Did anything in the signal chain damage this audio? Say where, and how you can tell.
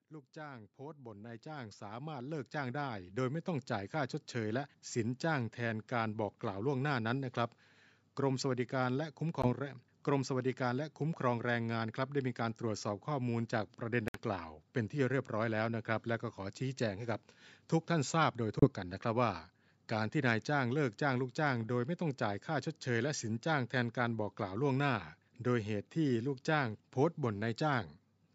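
Yes. Automatic gain rising in the call processing: the gain control climbed by about 16 dB between 0.08 and 4.03 s, so voice and background swell together over those first seconds.

Short silences with abrupt or briefly faded edges interrupt the sound at 9.42, 14.08 and 18.59 s, lasting roughly 0.08 to 0.1 s, with playback resuming as if it had continued underneath. This is likely a Bluetooth dropout on the wireless playback link, where late packets were discarded.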